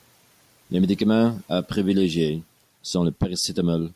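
No technical faults can be heard anywhere in the speech.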